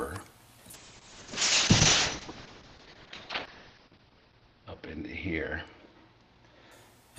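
From 0.74 s to 7.03 s the sound turns rough and watery and loses its top end above 6 kHz, at its worst for about 3 s. This is a call bitrate drop: the encoder was starved of bits, consistent with a fall from around 64 kbps to near 6 kbps.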